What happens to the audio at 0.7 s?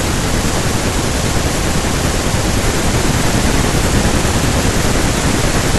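At 0.7 s the speech is torn by processor overload crackle, from 0.54 to 0.96 s. Dozens of buffers of roughly 5 ms miss their deadline, and each gap is filled with stale audio joined by hard edges, giving a gritty crackle. A spectrogram shows dense vertical broadband streaks; the waveform shows abrupt steps.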